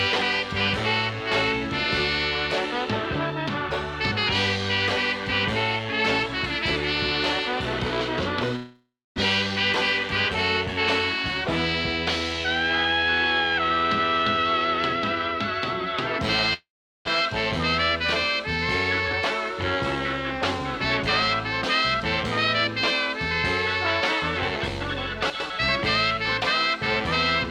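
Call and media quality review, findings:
Long network dropout, 8.56–9.20 s and 16.54–17.09 s: fading buzz fill, then silence, about 400 ms lost each; likely packet loss at the receiver, which shifts the delay.

Jitter buffer speed-up, 10.03–10.37 s at 110% and 17.88–19.76 s at 104%: faster, same pitch, hurried at 110%. Pitch-period pieces trimmed to drain excess buffered delay.

Chunks out of order, 25.3–25.5 s: jumbled moment. A 100 ms chunk plays one chunk late, leaving three hard joins in playout.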